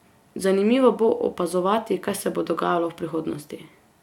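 A short speech recording with no technical faults to be heard anywhere in the signal.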